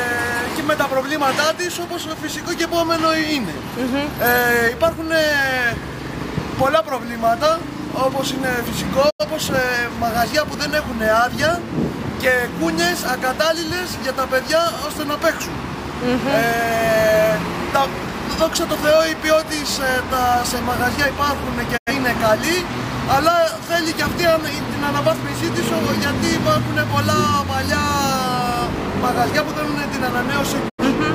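At 9.09 to 9.25 s, 21.76 to 21.92 s and 30.68 to 30.83 s the sound ducks into a brief hole, each a digital broadcast dropout. The receiver muted after frames failed to decode, then resumed. Each gap runs about 0.16 s, with about 85 ms wholly missing, which fits two lost frames, and a 20 ms fade. On the waveform these show as short tapered notches to silence; the spectrogram shows full-band blank columns.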